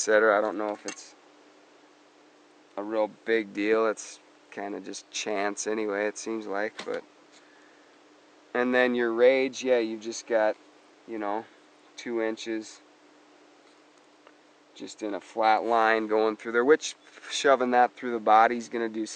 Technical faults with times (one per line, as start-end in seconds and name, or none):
none